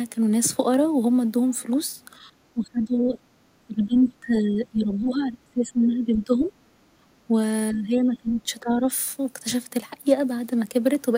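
From 2.54 to 3.18 s and 3.67 to 6.52 s the speech sinks by up to roughly 20 to 25 dB. This is speech suppressed in double talk, likely the echo canceller ducking the talker while the far end also speaks, and the waveform pinches while the upper spectrogram bands thin. Between 6.8 and 7.0 s the background is gated by the echo canceller, dipping about 8 dB, a brief darker gap in the noise floor. Speech then dips again, slightly at 7.28 to 7.36 s and by roughly 15 dB from 7.71 to 8.9 s.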